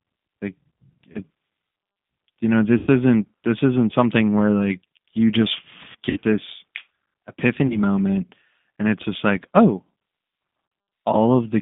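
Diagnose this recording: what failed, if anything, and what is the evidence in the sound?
G.729 codec, across the whole clip (codec stage): the speech is confined to a narrow line band of roughly 150 Hz to 3.6 kHz, with nothing above it, and it carries a plainly audible rough, slightly synthetic edge. That sound fits an 8 kbit/s G.729A stream. The decoder rebuilds each 10 ms frame from a vocal tract filter, a pitch predictor and a few pulses, so fine detail in the speech is lost and replaced by a coded approximation.

VoIP packet loss concealed by the speech codec (network stage) occurs at about 1.12–1.19 s, at 2.78–2.89 s after "you know" and before "isn't this isn't something", at 5.92–6.19 s after "where like you just", at 7.67–7.79 s before "moment and it's just", and at 10.66–10.72 s. In these spots the speech smears into a buzzy tone or a coloured noise that fades. The gaps are 30, 90, 90, 30 and 60 ms, which fits dropped 30 ms packets. 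The 5.92 s event is spread over 240 ms, with a longest run of 60 ms. The decoder extrapolates from its last pitch and filter while lowering the gain. Because each frame builds on the previous one, the speech stays weak or distorted for a short time after the packets return.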